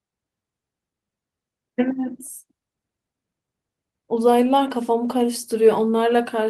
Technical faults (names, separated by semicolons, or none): lost packet rebuilt from error correction